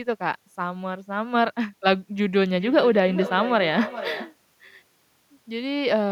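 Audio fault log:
2.38–4.40 s feedback echo between two devices: speech recurs roughly every 0.4 s, about 11 dB down, replayed into the microphone; discrete repeats, unlike reverb's tail.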